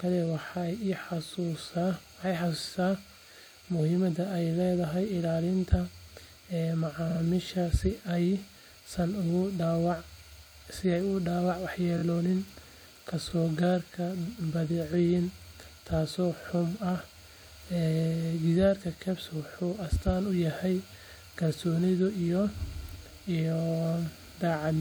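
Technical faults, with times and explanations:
7.09–7.19 s, 11.97–12.02 s, 13.29–13.32 s, 16.57–16.59 s, repeated frames: short blocks of the compressed stream replay (46.4 ms twice at 7.09 s, 23.2 ms twice at 11.97 s, 23.2 ms once elsewhere), giving a stutter and lengthening the audio.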